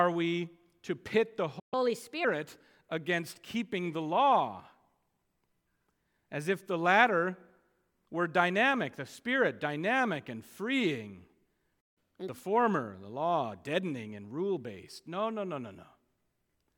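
At 1.59 s the speech cuts out for about 127 ms, a playback stall, likely the player running short of data or its output thread being blocked. It resumes at 1.74 s with catch-up at higher speed: until 2.25 s the backlog is resampled at 1.25 times normal speed, so the speech runs quicker and its pitch rises by roughly four semitones before settling back. The same sequence recurs at 11.80 s with a 156 ms silence, followed from 11.98 to 12.29 s by a stronger 1.5x catch-up that raises pitch by about seven semitones.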